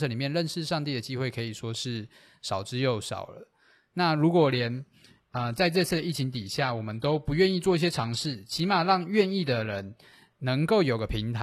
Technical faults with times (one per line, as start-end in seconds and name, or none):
4.36-10.36 adaptive stream at a lower bitrate